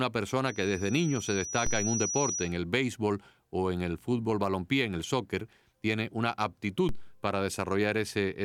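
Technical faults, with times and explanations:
0.47–2.57 s, loudspeaker feedback squeal: the microphone is picking up the loudspeaker it drives, and at 5.8 kHz the loop gain around that path rises above unity, so that one frequency keeps feeding itself. Over roughly a second and a half it swells from a faint whistle into a piercing high squeal that ends up about as loud as the speech, then drops away at 2.57 s.
1.67 s and 6.89 s, DC step: twice the waveform's zero line suddenly jumps, by about −24 dBFS each time, and the offset then drains away slowly, as if through a high-pass around 2 Hz. The sudden shift in the baseline is what you hear at each moment as a brief low thump. The first lands inside the feedback squeal and the second on its own, and the speech carries on unchanged through both.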